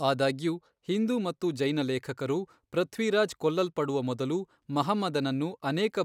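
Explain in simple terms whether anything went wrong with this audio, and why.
Nothing went wrong with this speech recording that a careful listener can pick out. At no point does anything in the sound stand out as a technical problem.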